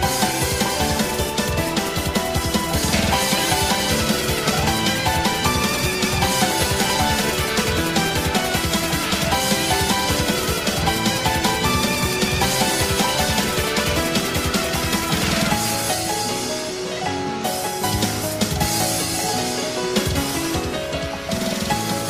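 Throughout the clip a buzzing, chirping layer of computer activity noise sits well below the signal, pulsing at roughly 70 times a second. Shifting processor or peripheral load disturbs the shared ground of the audio circuit, so the interference follows the machine's activity, not the sound.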